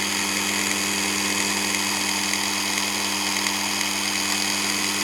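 Nothing stood out on listening to these everyday sounds.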